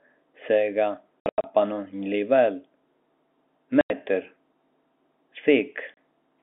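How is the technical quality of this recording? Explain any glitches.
The recording has three dropouts from packet loss filled with silence, heard over telephone-band audio limited to roughly 250 Hz to 3.5 kHz. At 1.21–1.44 s, about 180 ms goes missing in scattered holes, the longest 90 ms. A 90 ms gap follows at 3.81–3.90 s and a 30 ms gap at 5.94–5.97 s. Lost packets were replaced by plain silence, and every gap is a multiple of 30 ms, which fits 30 ms packets. There is no repeated or faded sound bridging the holes, which rules out concealment.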